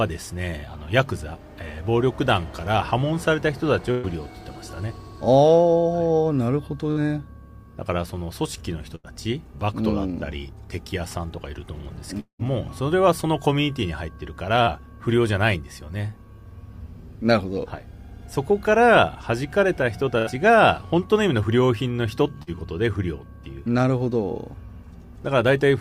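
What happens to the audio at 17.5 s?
Nothing goes wrong at 17.5 s; the audio plays through that moment intact.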